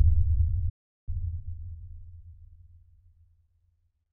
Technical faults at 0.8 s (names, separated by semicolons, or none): playback stall